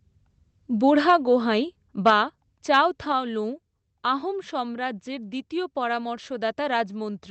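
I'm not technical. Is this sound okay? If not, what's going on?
No. At about 3.12 seconds the microphone volume stepped down, most likely because the call software judged the input too loud and turned the microphone's level down in one move. The speech and background both suddenly become noticeably quieter from that point on.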